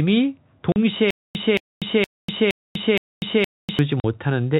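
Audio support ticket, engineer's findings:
Packet loss filled with silence at 0.72 to 0.76 s and again at 4.00 to 4.04 s. Two 40 ms holes with hard edges, consistent with two 20 ms packets dropped each time. Receiver jitter buffer inserting digital silence instead of concealment.

Stutter with silent gaps from 1.1 to 3.8 s. A 223 ms fragment replays five times, each followed by about 245 ms of dead silence, on a steady 468 ms cycle. Likely a player or stream stall, re-emitting the last buffer on each retry. The intended audio in that span is lost. G.711 mu-law narrowband character is present throughout the call.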